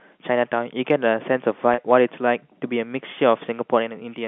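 Packet loss with pitch repetition hits this speech clip at 1.74 to 1.78 s. About 40 ms of audio went missing, which fits four 10 ms packets, and the receiver filled the gap by looping the last pitch period, so the sound briefly holds on a buzzy, slightly frozen tone. It is carried over G.711 telephone coding, limited to roughly 150 Hz to 3.5 kHz.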